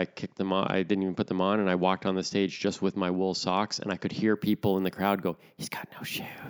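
Imaging from sample-and-hold upsampling, 4.37 s to the end: repeated samples, fitting a 16 to 48 kHz conversion, mirror the speech into 8 to 16 kHz as metallic fizz about 20 dB down.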